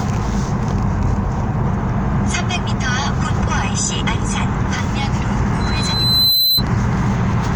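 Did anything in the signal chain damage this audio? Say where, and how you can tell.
Yes. A loudspeaker feedback squeal appears in the analogue stage, where a microphone was picking up the loudspeaker it was feeding and the loop gain at one frequency rose above one. From 5.60 to 6.63 s a single 4 kHz tone builds out of the everyday sounds, swelling over most of a second until it sits a few dB above them.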